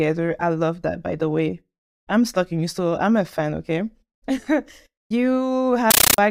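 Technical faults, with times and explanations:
5.91 to 6.18 s: compressed stream played as audio. An undecoded Dolby Digital bitstream was played as samples. Each frame gives a 13.3 ms noise burst, then silence, 31.25 times a second. Loud, chattering static replaces the speech.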